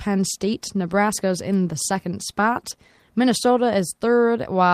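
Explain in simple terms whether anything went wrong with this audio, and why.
Nothing went wrong; the speech has no audible faults.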